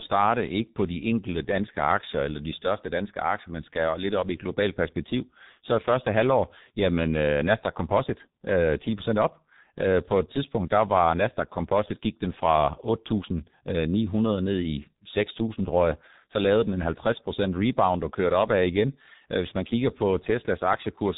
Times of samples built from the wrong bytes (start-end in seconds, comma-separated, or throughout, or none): none